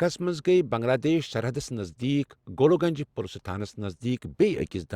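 Speech recording with no audible technical faults anywhere in the clip.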